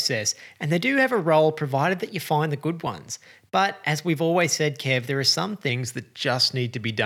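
From 5.69 s to the end, the audio is played at a wrong sample rate, consistent with 48 kHz material clocked out at 44.1 kHz with no conversion. Speed and pitch drop together: the speech runs at 0.919 times normal speed, about 1.5 semitones lower, sounding slightly slow and deep.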